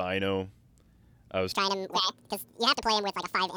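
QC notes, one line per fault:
1.53–3.56 s, section at the wrong speed: from just after "I was" to the end, the audio was likely replayed against the wrong clock at 1.97 times its recorded rate, so the speech suddenly rushes and jumps about ten semitones higher.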